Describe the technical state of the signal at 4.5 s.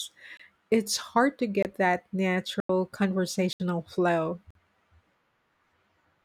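At 4.51 s the speech drops into a block of digital silence lasting about 46 ms, until 4.55 s. Samples were replaced by zeros, which fits a 2048-sample buffer left unfilled. The sound cuts out and back abruptly, so it sounds like a short hole.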